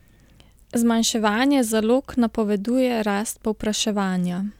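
Nothing in this short bit of speech trips over itself: no dropouts, no glitches, no faults turn up anywhere along the way.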